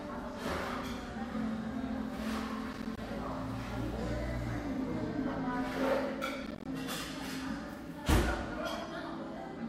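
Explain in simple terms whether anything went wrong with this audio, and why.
Two short bursts of processor overload crackle come through, one from 2.73 to 2.98 s and another from 6.46 to 6.66 s. The computer playing or recording these everyday sounds couldn't keep up, so several small chunks of audio in a row, each roughly 10 ms long, never arrived in time. Each missing chunk became a tiny hole of silence with hard edges, and a quick run of those holes is what gives that gritty crackle before it clears.

Near the end, at 9.36 s, there's a case of compressed frames skipped. Part of the compressed file was either missing or rejected as damaged, so playback jumps forward by roughly a tenth of a second, which fits a handful of frames being dropped.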